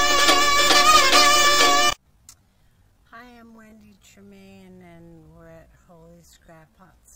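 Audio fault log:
1.43 to 7.15 s, time-stretched section: from 1.43 s to the end, the audio was likely stretched in software to fill a longer duration, playing at about 0.59 times its original pace while keeping its pitch. To lengthen it without lowering the pitch, short pieces of the sound were repeated, so the pace drops abruptly at 1.43 s and everything after that point sounds drawn out. The pitch stays where it was.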